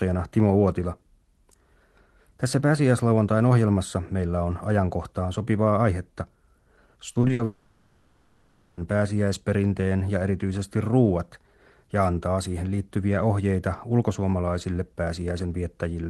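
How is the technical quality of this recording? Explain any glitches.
The speech has two connected glitches in the middle of the clip, both from a network connection losing audio. The call path keeps the top end up to about 12 kHz, which fits a low-bitrate Opus call at around 20 kbps.

Repeated packet loss (robotic sound) runs from 7.13 to 7.41 s. The speech turns choppy, with four short holes patched over, the longest 60 ms, covering roughly 43% of that stretch. Audio packets kept failing to arrive, and the receiver filled each hole by extending the preceding sound.

From 7.45 to 8.79 s the speech is replaced by a continuous stretched buzz or hiss that fades, lasting about 1.3 s and never falling to silence, and the original speech from that span never returns. This is likely a long network dropout, with the receiver synthesising sound from the last audio it had for the whole gap.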